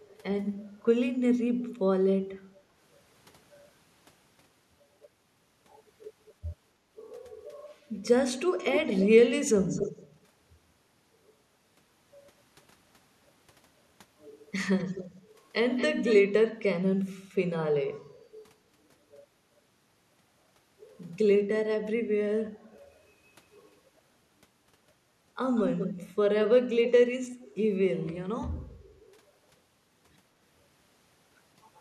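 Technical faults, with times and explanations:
0.08–0.17 s, 8.70–9.08 s, 9.67–10.04 s, 14.78–15.08 s, 15.76–16.15 s, 25.55–26.11 s and 26.85–26.89 s, echo leak: a delayed copy of the speech trails the original by 274 ms in the first instance, then 246 ms, 223 ms and finally 187 ms. It ranges from barely audible to nearly as loud as the speech itself. The likely cause is a far-end echo canceller failing to remove its loudspeaker's sound from the microphone. On a spectrogram the same harmonic patterns reappear shifted right by that delay, and the waveform shows a smaller repeat of the envelope.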